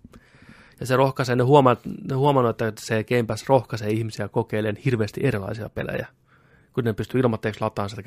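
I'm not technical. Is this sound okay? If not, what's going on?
Yes, nothing in this recording points to a technical problem with how the sound was captured, stored or played back.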